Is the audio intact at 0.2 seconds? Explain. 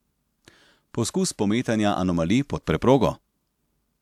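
Yes, at 0.2 seconds the speech plays through cleanly, with no dropout, click, distortion or other fault to be heard at that point.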